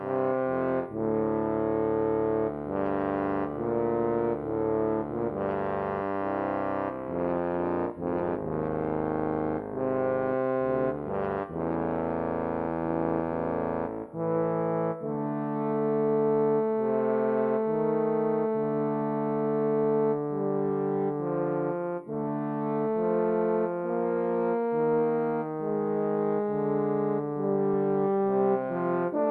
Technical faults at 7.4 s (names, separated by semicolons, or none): none